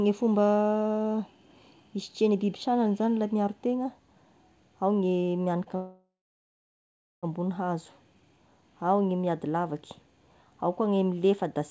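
Speech carried over a wideband call path, with an empty spectrogram above 8 kHz consistent with a codec such as G.722, shows two faults. At 5.64 to 5.68 s, a short stall from a late packet holds the sound for about 18 ms while the jitter buffer waits, visible as a brief smeared, flattened strip. From 5.76 to 7.25 s, a call audio freeze inserts 1.47 s, likely from packets held up in transit. A fading buzz tail gives way to roughly 1.08 s of flat waveform and a blank spectrogram before the speech resumes from where it stopped.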